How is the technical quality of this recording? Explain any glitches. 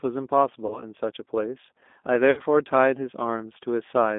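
Quality is limited throughout by narrowband, low-rate speech coding, with two short dropouts where the decoder patched over missing audio.

The speech sounds slightly rough and synthetic, confined to a thin telephone band of roughly 250 Hz to 3.6 kHz, with no air or sibilance above that. That is the G.729 codec, and the damage is plainly audible. It fits an 8 kbit/s rate. The decoder rebuilds each 10 ms frame from a vocal tract filter, a pitch predictor and a few pulses rather than the actual waveform, hence the rough, synthetic texture.

At 0.66 to 0.83 s and again at 2.31 to 2.41 s, the speech smears into a buzzy tone or coloured noise that fades, then returns weak and distorted before recovering. This is VoIP packet loss concealed by the speech codec. About 40 ms was lost in the first gap and 60 ms in the second, which fits two and three 20 ms packets. The decoder extended its last pitch and filter settings while lowering the gain. 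Because each frame builds on the previous one, the distortion lingers briefly after packets resume.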